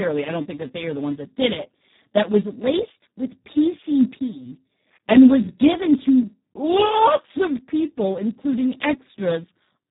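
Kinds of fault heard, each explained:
Speex codec: The speech sounds hoarse, grainy and buzzy throughout, with a robotic edge. Nothing is present above about 3.8 kHz, so it is also dull and boxed-in. Speex is a CELP speech codec that models the voice from a small set of parameters. At its lowest quality settings it has too few bits to shape the excitation, and it behaves almost like a vocoder. The heavy damage here fits a bitrate of around 4 kbps.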